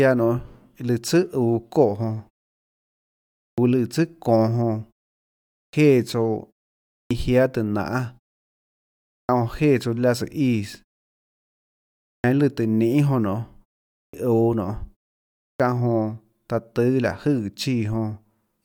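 Speech resumes clipped at the start after a pause at 3.34, 5.53, 6.87, 9.05, 12.04, 13.91 and 15.37 s. Each time, roughly 200 to 240 ms is lost. The output path seems to wake slowly after silence. Words then jump in abruptly, missing their first sounds.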